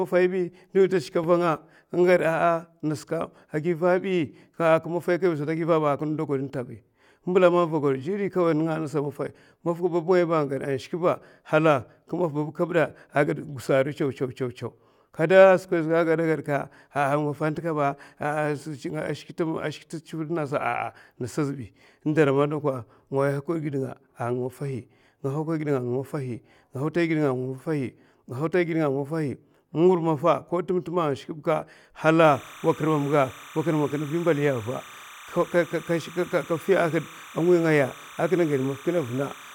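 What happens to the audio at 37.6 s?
Timecode bleed runs from 32.24 s to the end of the clip. Linear timecode from an adjacent track or cable leaks in as a square wave flipping between roughly 1 and 2 kHz at a 29.97 fps frame rate. It is heard as a steady chirping warble, roughly 20 dB below the speech.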